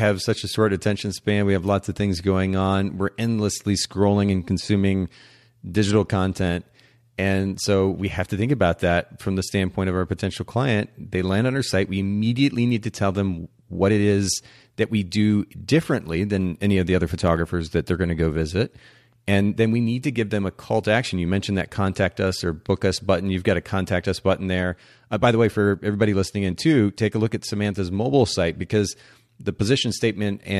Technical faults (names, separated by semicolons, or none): dropped samples